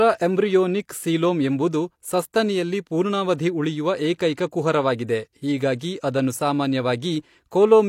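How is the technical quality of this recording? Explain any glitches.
Two brief pre-echo glitches mar the recording. At 2.33 s, between "ಸೀಲೋಮ್ ಎಂಬುದು" and "ಪೂರ್ಣಾವಧಿ ಉಳಿಯುವ", a short hiss of about 12 ms leads into a softened attack, and from 5.78 to 5.81 s a similar smear spans about 26 ms. A transform codec spread quantisation noise meant for each loud onset across the quiet moment just before it.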